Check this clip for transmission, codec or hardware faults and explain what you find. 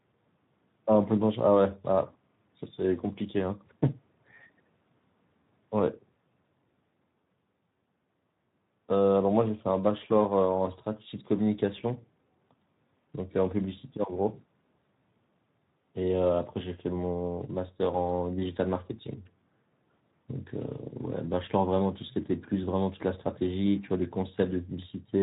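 One fault runs through the whole speech clip: Speex codec damage, plainly audible from start to end. Speex is a CELP coder that models the vocal tract and spends few bits on the excitation, so the voice comes out grainy and hoarse. The degree of roughness fits a bitrate of around 11 kbps. Unlike packet loss, nothing drops out or repeats, and unlike transform codecs there is no swirly, watery smearing; the harshness stays steady and tied to the voicing.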